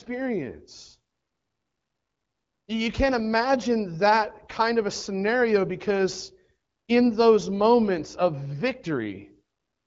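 No faults are present in this speech, which comes through an AMR wideband (HD Voice) codec at 12.65 kbit/s with only light coding damage.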